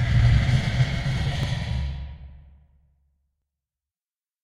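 Overlap between stream segments: adjacent segments of this sound recording, roughly 2 s long, claim overlapping time stamps, so the player discards a few milliseconds of genuine audio, about 5 ms at 1.43 s and 11 ms at 3.42 s, leaving waveform jumps heard as tiny skips.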